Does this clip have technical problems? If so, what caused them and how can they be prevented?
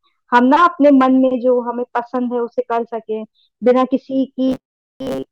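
Yes: from 4.48 to 5.31 s, robotic sound from repeated short buffers turns the speech into a fixed 133 Hz metallic buzz. This is likely from starved audio being padded by looping the last roughly 7.5 ms chunk for most of that stretch. A spectrogram shows rigid harmonic stripes at multiples of 133 Hz, and the waveform shows identical short cycles. Prevent it with larger jitter buffers and steady, real-time-priority audio scheduling.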